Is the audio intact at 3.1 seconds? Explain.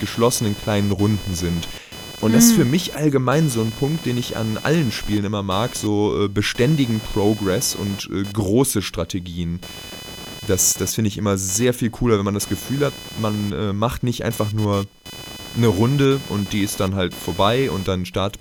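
No. At 3.1 seconds the speech carries computer activity noise, and it runs through the whole clip. Changing load from the processor, graphics card or mouse shifts the ground the audio circuit shares with the computer. That disturbance leaks into the signal. It sounds like a buzzing, chirping texture pulsing around 500 times a second. It sits roughly 15 dB below the speech. It follows the computer's activity, not the talking.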